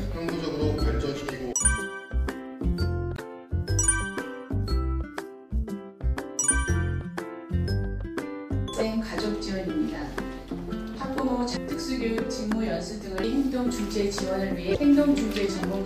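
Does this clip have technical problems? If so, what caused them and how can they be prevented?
Yes: two short blips of damaged data in a compressed stream, at 3.15–3.19 s and 14.72–14.77 s. Corrupted bytes throw the decoder off until it resyncs. Checksummed transfers and verified copies would prevent it.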